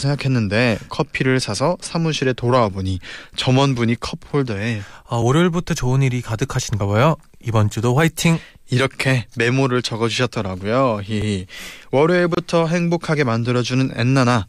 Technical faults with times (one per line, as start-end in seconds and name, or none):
5.22 audio missing between chunks
11.22 audio missing between chunks
12.35-12.37 gap at a join of encoded pieces